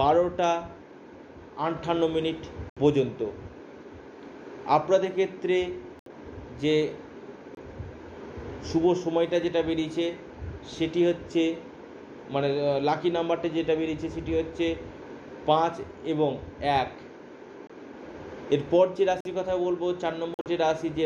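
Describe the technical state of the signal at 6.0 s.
Damaged compressed data was rejected by the decoder, which substituted silence: a corrupt frame muted dropout runs from 5.99 to 6.09 s. The sound cuts off abruptly into a hole of about 95 ms, which fits roughly four lost frames, and resumes on time.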